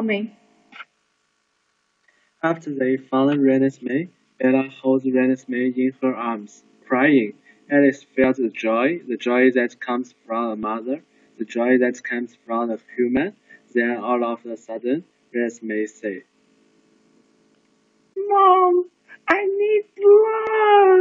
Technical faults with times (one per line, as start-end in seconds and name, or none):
10.63 dropped buffer (overrun)
19.30 dropped buffer (overrun)
20.47 dropped buffer (overrun)